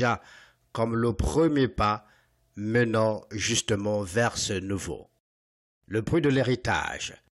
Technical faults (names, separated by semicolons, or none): none